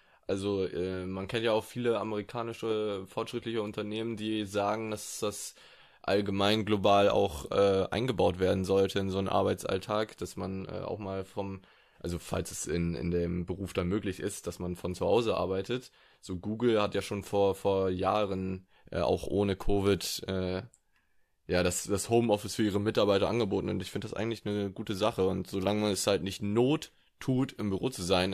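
No technical faults can be heard anywhere in the recording, and the signal holds steady and unbroken throughout.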